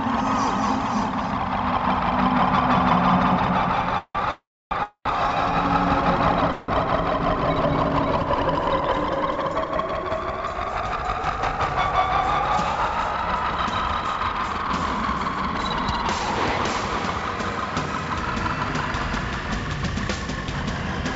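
From 1.64 to 6.40 s a doubled audio track is heard: a full-band copy trails about 200 ms behind, roughly 5 dB quieter, likely from a second, slower capture path. Unlike room echo, it has no decay and starts and stops abruptly.

Call audio freezes interrupt the sound at 3.98–4.17, 4.31–4.73, 4.83–5.07 and 6.52–6.70 s. Each is likely a jitter buffer running empty while packets were delayed. The last sound is stretched into a fading buzz, and the first three gaps fall to silence. Unlike a dropout, the audio resumes exactly where it stopped, with nothing lost.

Between 12.76 and 14.66 s, a jitter buffer speed-up plays the sound at 108% speed and trims about 150 ms in small pitch-period pieces. The result is hurried but keeps the same pitch, unlike a sped-up tape.

The audio passes through a G.722 call path at 64 kbps, which leaves nothing above 8 kHz.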